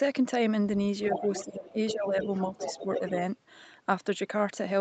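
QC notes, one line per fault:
1.01–1.45 s and 1.87–3.11 s, other side's voice leaking through: a second voice sits about 5 dB, then about 10 dB, under the talker, likely loudspeaker echo the canceller left behind.
1.08–2.29 s, speech suppressed in double talk: the talker dips by up to about 15 dB for roughly 0.7 s in pieces, likely the canceller ducking both voices during overlap.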